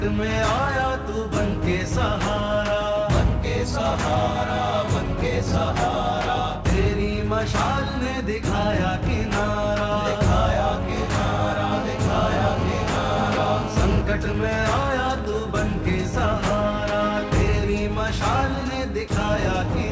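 From 11.72 to 14.02 s, GSM phone buzz: a nearby phone in a call transmits 217 bursts per second, rectified into a hard, raspy, harmonic-rich 217 Hz buzz about 10 dB below the signal. From 14.10 to 15.25 s come GSM signalling bursts, with the phone's user silent in the call, producing even ticks with a longer 217 Hz buzz twice a second at a similar level. At 19.08 to 19.10 s, 20 ms of sound gives way to comfort noise, likely sound dropped by the voice detector treating it as background.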